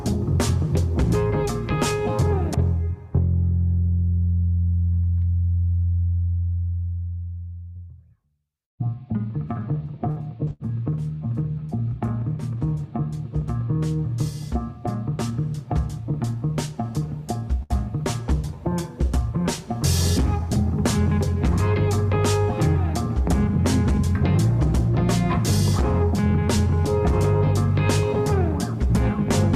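Around 7.69 to 7.78 s and again at 8.65 to 8.74 s you get a burst of packet loss, two in quick succession. Each time a run of packets didn't make it, so the receiver kept the last bit of sound going for roughly 55 to 60 ms and faded it down. You hear a brief held buzz or hiss, then the audio picks up again with about 60 ms gone in each case.

Just after that, from 9.61 to 10.63 s, it turns into repeated packet loss with a robotic sound. Four separate gaps land inside about a second, the longest 68 ms, and each one gets papered over by stretching whatever came before it. About 14 percent of that stretch is concealed audio, so the sound comes out choppy with little pieces missing between the patches.

At 14.77 to 15.31 s there's a jitter buffer speed-up. The buffer had built up more audio than it wanted, so the receiver trimmed out tiny pitch-period-sized slices over and over, around 50 ms in total. 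Playback runs at about 107 percent speed there with the pitch unchanged, so it feels slightly rushed for half a second.

Finally, at 17.63 to 17.73 s, there's a short stall from a late packet. The packet wasn't there in time, the buffer ran dry, and the receiver held the current sound for 68 ms until it showed up, then carried on from the same spot. Nothing is actually lost, but you hear a sound hang on a touch too long with a faint buzz, and everything after it sits 68 ms later.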